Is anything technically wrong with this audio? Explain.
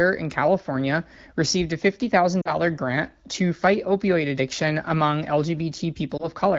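Yes. There are lost AMR speech frames at 2.41–2.55 s, just before "grant to fight opioid", and at 6.17–6.28 s. The first loses about 40 ms of the wideband speech, and the second about 20 ms. The decoder stretches the last pitch and vocal tract settings while the gain falls, so the first spot fades to near silence and the second sounds like a brief dip or warble rather than a hard silent cut.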